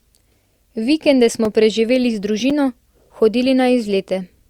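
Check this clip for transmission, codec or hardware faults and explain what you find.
Two faults turn up, both blocks of digital silence. At 1.45 s (2.9 ms) and 2.50 s (5.8 ms), the speech drops to silence, which fits 128- and 256-sample buffers left unfilled. The abrupt edges produce small ticks. A waveform shows a flat line, and a spectrogram shows a thin empty slot edged by broadband streaks.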